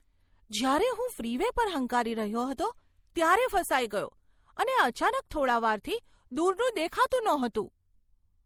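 Across the whole speech clip, two layers of compression artefacts overlap, with nothing above 20.2 kHz. This is likely transcoding between lossy codecs, from MP3 to Opus.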